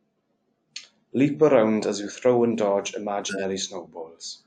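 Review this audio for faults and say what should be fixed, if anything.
Right after "you throw and dodge", from 3.29 to 3.44 s, there's a corrupt frame decoded: a few damaged frames played anyway, throwing a harsh burst to around -10 dBFS. Worth adding error checking so bad frames get concealed instead of played.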